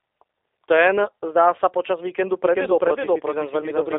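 From start to finish the speech sounds narrow and boxy, with nothing above about 3.7 kHz and little below 300 Hz, and it carries a slightly rough, synthetic edge that is plainly audible. That is G.729 codec damage, which fits an 8 kbit/s G.729A link. The codec does not send the waveform. It resends a vocal tract filter, a pitch predictor and a few pulses per frame, and the decoder rebuilds the speech from them, which causes the roughness.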